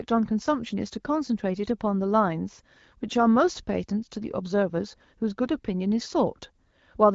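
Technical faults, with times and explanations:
The speech carries the light, band-limited character of AMR wideband (HD Voice) coding at a rate that sounds consistent with 12.65 kbit/s, with the band up to 6.4 kHz modelled and the top stretch to 7 kHz filled with shaped noise, and nothing beyond that codec's ordinary imprint can be heard.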